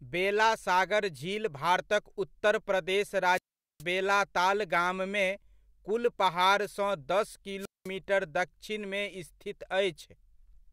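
The speech has two wireless microphone squelch dropouts. At 3.32 s the radio link fades, a short burst of hiss comes up, and then the receiver's squelch shuts the output, leaving a hole of about 420 ms before the voice comes back around 3.83 s. The same thing happens again from 7.59 to 7.89 s, this time with a shorter mute of about 200 ms.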